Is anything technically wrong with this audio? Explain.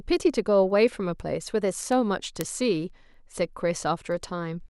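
Yes. Word clock ticks run from 0.22 s to 4.61 s: the receiving device's clock isn't locked to the sender's, drifting by roughly 100 ppm, so about every fifth of a second a single sample slips. This gives around twenty sharp, uneven ticks through the speech.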